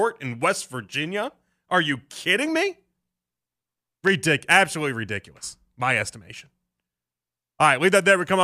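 At 4.07 to 4.09 s a single sharp pop cuts across the speech, peaking roughly 10 dB above the surrounding level, just before "absolutely ridiculous my estimation". The speech carries on underneath without a break. This loud pop is likely a brief voltage pulse, from something like a plug, switch, static discharge or driver glitch, added straight onto the signal. The following circuitry shapes that pulse into the short, hard click that stands out above the speech.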